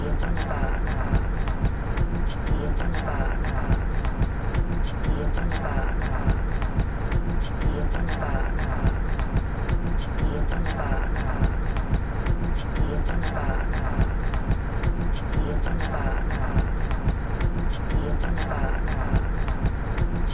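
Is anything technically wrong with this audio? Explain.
No, nothing stood out as technically wrong on listening to this recording of sounds.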